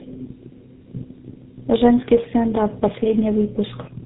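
Throughout, there's tandem speech coding: three speech codecs in a row each re-encode the last one's output, leaving rough, muffled, warbly speech with nothing above 3.8 kHz.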